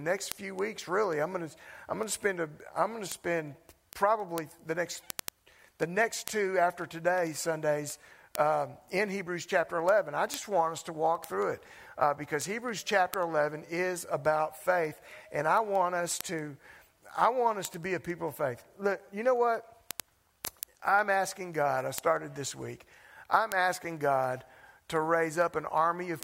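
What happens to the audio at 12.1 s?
At 12.1 s the audio sits inside a run of word clock ticks lasting from 0.14 s to 26.23 s. An unlocked receiver clock slips by roughly 200 ppm, dropping or repeating one sample. Sharp ticks recur about ten times per second.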